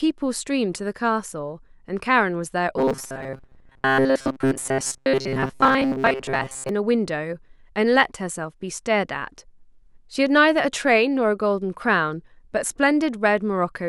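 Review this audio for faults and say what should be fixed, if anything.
From 2.78 s to 6.69 s the speech turns into robotic sound from repeated short buffers: a rigid, metallic buzz fixed at 134 Hz that only loosely follows the syllables. That pitch matches a segment of about 7.5 ms being looped. The likely cause is new audio arriving too slowly, so playback kept replaying its last buffer and skipped most of the real signal in that stretch. To prevent it, enlarge the playback or jitter buffer and stabilise the upstream delivery rate so underruns don't trigger short-segment looping.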